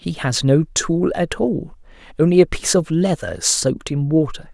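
No technical faults are audible.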